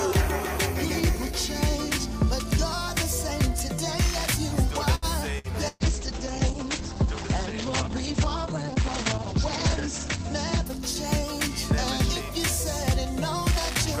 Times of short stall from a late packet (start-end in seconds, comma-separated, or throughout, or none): 4.95-5.05